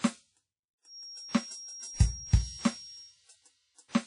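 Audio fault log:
Throughout: WMA compression. The music has a ringing, washy quality, with a hiss that swells and recedes along with the signal. Nothing is heard above about 10.1 kHz. This points to a transform codec using long blocks, likely early WMA at a low rate, which fits a bitrate of around 32 kbps. Quantisation noise smears over tens of milliseconds around each transient, and the weaker spectral lines are discarded entirely.
0.81 to 3.18 s: feedback whistle. A thin, steady tone at 5.6 kHz sits behind the music, about 20 dB below it, and swells and fades slowly in level before stopping at 3.18 s. Its steadiness and narrow pitch suggest a loudspeaker-to-microphone loop held just at the edge of instability, likely feedback. At that point a single frequency keeps sustaining itself without building into a runaway howl.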